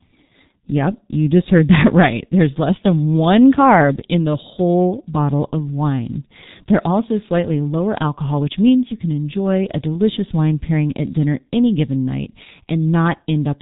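From start to finish the speech carries heavy G.723.1 codec damage. Nothing reaches above about 3.8 kHz, so the top of the spectrum is gone and the sound is muffled. The coder works in 30 ms frames and refreshes its model of the vocal tract slowly, so voicing turns rough and hoarse and quick consonants smear into each other. The degree of loss points to the codec's 6.3 kbit/s mode.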